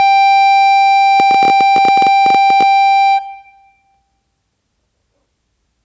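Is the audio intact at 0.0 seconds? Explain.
Yes, at 0.0 seconds the music is intact, with no fault present at that moment.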